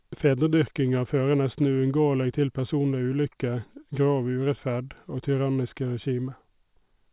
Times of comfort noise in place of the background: none

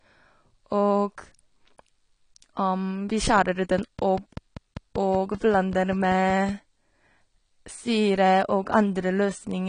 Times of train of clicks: 3.79-6.50

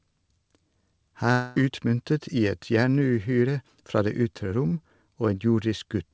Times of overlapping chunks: none

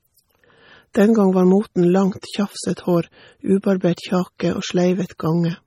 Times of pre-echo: 0.93, 2.21, 4.38

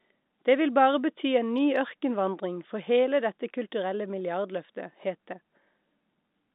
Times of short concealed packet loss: none

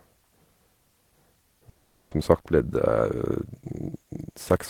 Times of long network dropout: 1.69-2.13

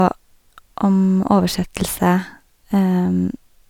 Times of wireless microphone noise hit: none

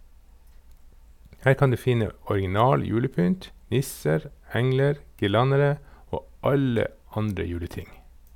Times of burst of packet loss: none

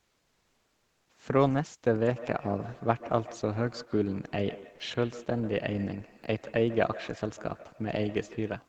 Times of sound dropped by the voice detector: 4.75-4.79

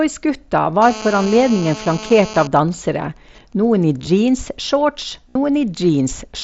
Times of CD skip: none

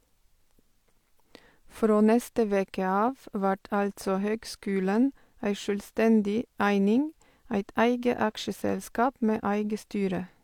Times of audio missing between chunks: none

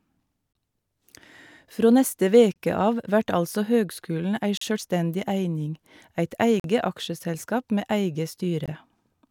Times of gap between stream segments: 0.53-0.55, 2.53-2.56, 4.57-4.61, 6.60-6.64, 8.66

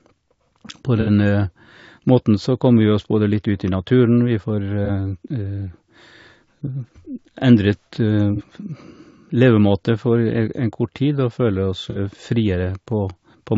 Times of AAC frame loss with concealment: 1.01-1.09, 4.85-4.90, 8.36-8.41, 11.90-11.98

